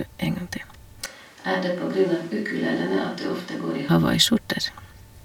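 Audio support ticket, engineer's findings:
Speech turns abruptly roomy and hollow at 1.06 s, thin in the low end, about 10 dB quieter, with room noise rising to roughly 25 dB under the speech. Hard return to close, full sound at 3.89 s. Switch to a distant microphone: close mic signal likely dropped, fallback pickup further from the talker capturing reflections and ambience.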